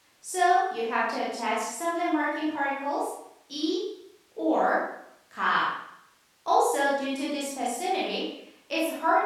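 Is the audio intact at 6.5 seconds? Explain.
Yes, the speech at 6.5 seconds plays through cleanly, with no dropout, click, distortion or other fault at that moment.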